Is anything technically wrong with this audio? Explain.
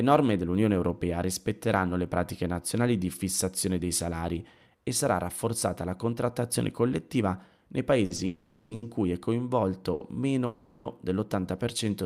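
Yes, the speech has three kinds of delivery fault.

Short stalls from a late packet occur at 8.05 to 8.12 s, 8.16 to 8.20 s, 8.75 to 8.84 s and 9.94 to 10.02 s. A sound is held for 20 to 70 ms, with a slight buzz or dip, then resumes where it left off. Each time, the jitter buffer ran dry, and the receiver stretched the last sound until the packet came. Nothing is lost, but each adds delay.

Call audio freezes occur from 8.26 to 8.73 s and from 10.46 to 10.87 s. The last sound is drawn out for about 450 ms and 390 ms as a fading buzz or hiss without dropping to silence, then the speech carries on from the same spot. The likely cause is packets held up in transit emptying the jitter buffer, with the receiver filling the wait.

A jitter buffer slow-down runs from 11.40 to 12.03 s. The speech plays at about 94% speed at unchanged pitch, with drawn-out sounds. The receiver repeated single pitch periods to rebuild its reserve, adding 48 ms in total.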